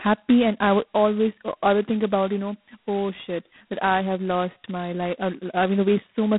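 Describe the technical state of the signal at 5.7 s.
At 5.7 s the speech carries a harsh, rasping hiss that rises and falls with its level, within a narrow telephone band from about 150 Hz to 3.7 kHz, with nothing above 3.9 kHz. This is heavy G.726 ADPCM damage, present throughout the clip. The codec sends only a coarse difference from a running prediction, and the thickness of the grain points to its lowest 16 kbit/s mode, at roughly 2 bits per sample.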